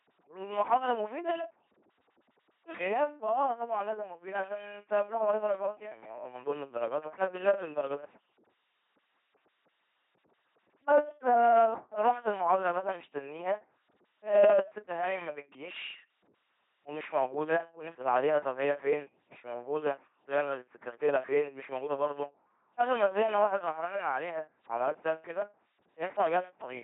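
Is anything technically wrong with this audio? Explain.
Yes. Throughout, the speech has passed through an LPC-10 vocoder, which fits a 2.4 kbit/s military coder. The voice is rebuilt by a small all-pole filter fed by buzz or noise, so it sounds mechanical and robotic, with stray buzzes and hiss and nothing above 3.8 kHz.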